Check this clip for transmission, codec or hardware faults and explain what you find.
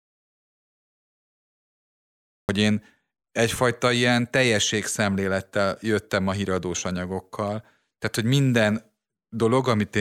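There's one fault here. From the very start to 2.49 s, an audio dropout to silence: plain silence, no room tone, likely a lost input link, with speech resuming mid-flow at "én egyfajta ilyen teljességszemlélettel".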